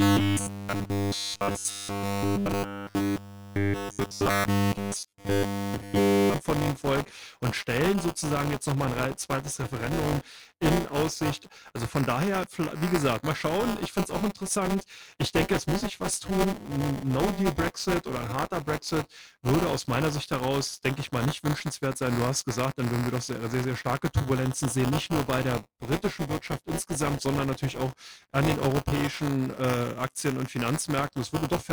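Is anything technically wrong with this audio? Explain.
Yes. Buffer tearing runs through the whole clip: the writer and reader of a ring buffer cross each period, splicing in a small slice of audio from roughly 15 ms earlier. That gives a 200 Hz rattle that vanishes in silence.

From 0.01 to 6.34 s there is robotic sound from repeated short buffers, likely from data arriving too rarely so that each 10 ms chunk is replayed. This imposes a rigid 100 Hz metallic pitch, lower than the tearing rattle.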